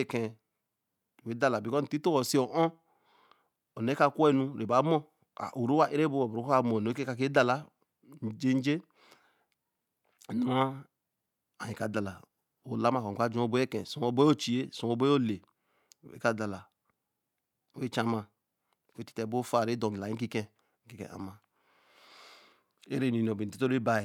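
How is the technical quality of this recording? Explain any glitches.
Nothing goes wrong here: the speech runs along without a single glitch to point to.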